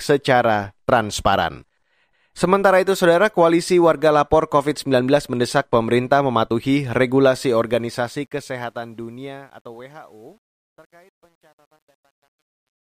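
From 7.46 s the speech fades out, and through to the end at 12.82 s there's truncation distortion on the fade. The gain stage keeps too few bits, with no dither, which fits a 10-bit path, so from about 9.22 s the tail goes gritty.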